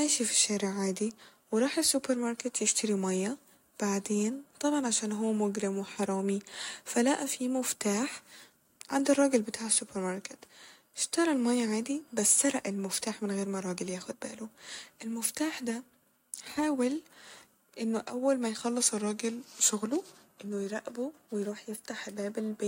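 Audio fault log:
18.65–20.48 s, drift correction step: the speech abruptly slows by about 5.6% and drops roughly a semitone, speed and pitch moving together, then snaps back. This likely comes from clock-matching software changing playback rate in one step to rebalance its buffer.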